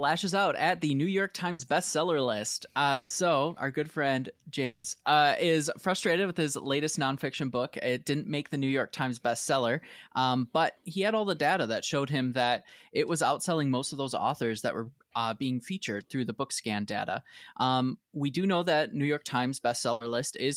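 A burst of packet loss at 1.51 to 1.69 s leaves about 80 ms of audio missing. The receiver filled that span by extending the last sound and fading it, so the speech turns briefly into a held buzz or fading hiss before resuming further on.

A long network dropout at 2.92 to 3.12 s, just before "our good friend", and another at 4.64 to 4.86 s, between "our good friend" and "uh is frustrated with", are the likely cause of 180 ms and 200 ms stretches of fading concealment, with the speech underneath lost.

A second burst of packet loss at 19.92 to 20.02 s again replaces about 80 ms of speech with a short fading buzz or hiss.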